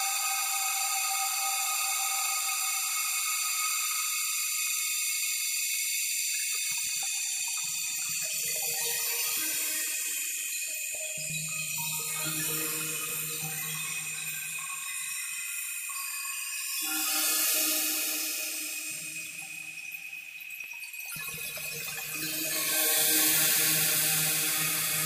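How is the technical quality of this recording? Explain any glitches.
One glitch stands out in this recording of sounds. A repeated buffer occurs at 20.64 s. New audio didn't reach the playback device in time, so it played the 5 ms block it already held a second time before carrying on. Because the repeated piece is so short, it doesn't come across as a stutter. It is a brief click or buzz where the hard seams join, and no audio is noticeably lost.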